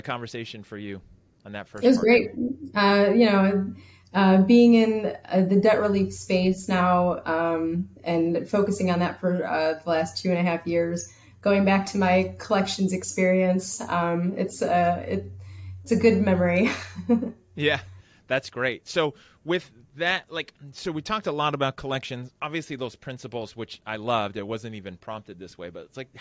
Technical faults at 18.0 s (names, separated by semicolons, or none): none